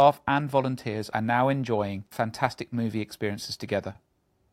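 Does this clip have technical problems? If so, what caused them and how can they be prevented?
No, there are no technical problems.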